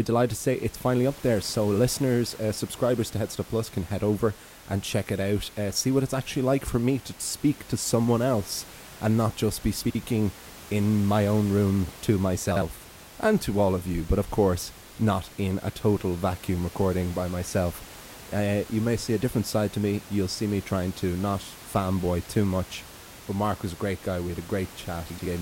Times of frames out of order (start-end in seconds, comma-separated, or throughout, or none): 9.84-9.95, 12.51-12.62, 25.10-25.26